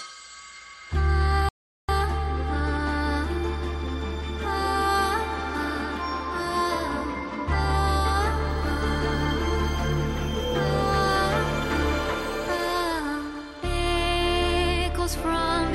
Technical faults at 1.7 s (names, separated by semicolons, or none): rebuffering stall